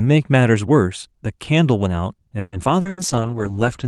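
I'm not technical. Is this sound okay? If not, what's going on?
No. Repeated packet loss (robotic sound) hits from 2.39 to 3.01 s. Four bits of the call audio went missing, the longest 0.14 s. Each hole was patched by stretching the previous sound, so nearly half that stretch comes out choppy and robotic.

A call bitrate drop starts at 2.85 s and lasts to the end. The connection seemed to slow, so the call squeezed the speech into far less data. The sound turns rough and watery, and the highest frequencies are cut off, so it goes muffled.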